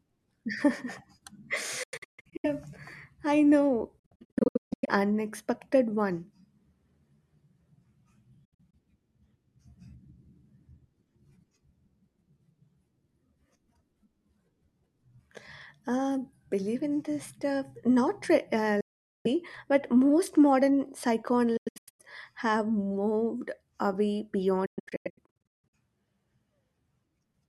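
Bluetooth dropouts break up the speech at 1.83 to 2.46 s, 3.99 to 4.89 s, 8.45 to 8.74 s, 18.81 to 19.27 s, 21.57 to 22.00 s and 24.66 to 25.74 s. The output cuts to silence in abrupt holes, most as clusters of short gaps, the longest single gap about 160 ms. Each time, speech resumes further on rather than where it stopped, likely because packets reached the headphones too late and were discarded.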